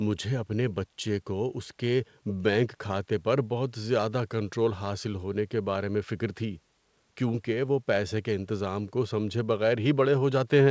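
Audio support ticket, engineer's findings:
No faults found; the speech tops out near 8 kHz with its lowest bass trimmed, which fits normal call microphone processing feeding a G.722 wideband telephone link at what sounds like the full 64 kbit/s rate.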